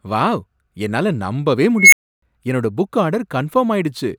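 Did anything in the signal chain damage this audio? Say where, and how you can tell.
Yes, an unstable filter in the call processing stage. After "வாவ் என்னால நம்பவே", at 1.77 s, a tone near 2 kHz swells over 150 ms into clipping. The recursive feedback grows unbounded and overflows, giving 300 ms of silence before "என்னோட புக்" at 2.22 s. A spectrogram shows a brightening horizontal line then a blank gap. The waveform balloons, flat-tops, then drops to silence.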